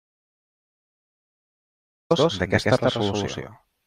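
From the first instant to 2.11 s the clip is an audio dropout to silence, already under way when it begins: plain silence with no room tone. The input was likely lost, perhaps through a disconnected device or a mute, while recording carried on writing silence.

Once the speech enters, a doubled audio track runs throughout. A second full-band copy trails about 150 ms behind at roughly equal level, dry and without room colour, giving a hard slapback. A second capture path or misaligned edit is the likely source.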